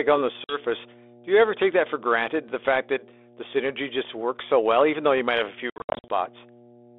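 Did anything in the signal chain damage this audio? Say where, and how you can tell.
Yes. The first fault is in the analogue wiring: mains hum. A steady 60 Hz tone runs under the whole clip, strong, roughly 10 dB below the speech. A ground loop or nearby transformer is coupling the power line into the signal before conversion.

The second is on the network: packet loss on an ADPCM call. Just after "on the", a hard-edged 50 ms gap falls between 0.44 and 0.59 s. Several packets vanished and were filled with silence. The decoder's predictor and step size lost track of the sender's, so speech resumes slightly distorted. From 5.70 to 6.10 s it is worse. About 270 ms is lost in scattered holes over 400 ms, the longest run 70 ms, so the sound breaks up repeatedly. The band-limited telephone sound fits light 32 kbit/s G.726 coding, which is behaving as that codec does.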